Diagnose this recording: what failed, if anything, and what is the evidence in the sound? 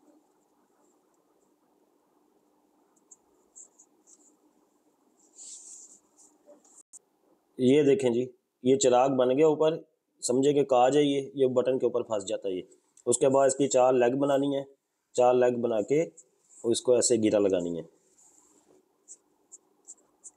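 Dropped samples at 16.23 s, heard as a single sharp click with a thin vertical line through the spectrum at that instant. The waveform jumps straight from one value to a later one because a handful of samples, around a tenth of a millisecond, never made it into the stream. That is far too brief to remove any audible sound, so only the discontinuity is heard. The likely stage is the driver or buffer handoff, where a few samples went missing in transfer.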